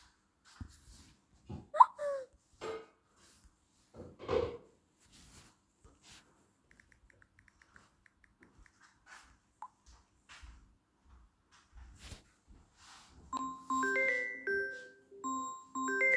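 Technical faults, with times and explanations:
No technical faults turn up anywhere in this recording of sounds, so there's nothing here to flag.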